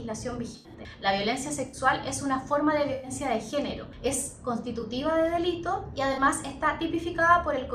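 Damaged AAC frames reached the decoder, which detected the corruption and concealed each frame by muting it or by substituting a scrambled copy of the last good spectrum. That is corrupt frame concealment, and it happens five times: 0.52 to 0.70 s, 1.67 to 1.77 s, 2.93 to 3.11 s, 4.80 to 4.84 s, and 6.13 to 6.18 s. The lengths fit runs of six, three, five, two and two consecutive frames.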